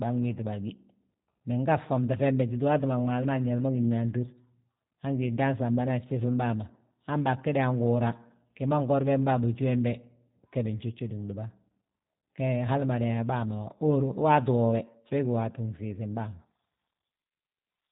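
From start to finish, the speech has been squeezed through a G.729 codec, a low-rate VoIP coder whose character fits a narrowband 8 kbit/s stream. Rather than carrying the waveform, it rebuilds each short frame from a vocal tract model, a pitch estimate and a handful of pulses, and discards the upper band. Nothing above about 3.8 kHz survives, so the speech sounds boxed-in and dull, with a plainly audible rough, slightly synthetic buzz throughout.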